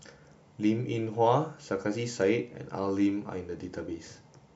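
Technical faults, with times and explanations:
No technical faults are heard in this speech clip.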